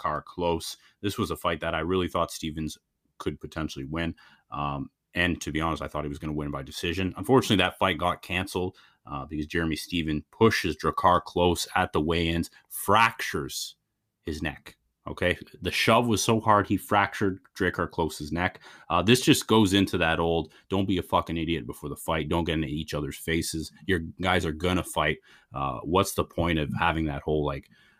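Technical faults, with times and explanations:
No technical faults are audible anywhere in the speech.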